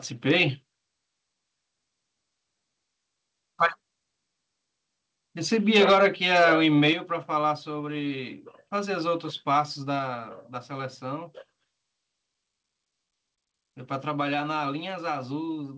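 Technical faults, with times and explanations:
5.75–6.06 s, microphone overload: the loudest stretch here gets a harsh, crackly edge, with peaks pushing roughly 6 dB past full scale and something like 7 percent of samples flattened. Likely the mic input was set too hot, so the converter just chopped the tops off the waveform.
5.93 s, microphone volume stepped down: right in the middle of that distorted burst the level drops by about 2 dB in one go, taking the background with it. That's likely the call software noticing the clipping and pulling the input gain down.
6.88–6.91 s, microphone overload: a second, much shorter crackle, only about 1 dB over and around 1 percent of samples clipped, so it's a brief gritty tick rather than sustained distortion. The input was likely still a touch too high after the first cut.
6.93 s, microphone volume stepped down: a bigger step this time, about 6 dB, so voice and room noise both audibly sag at once, through a call path whose top end stops around 8 kHz. 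That's likely the gain control reacting to the clip just before it and trimming harder.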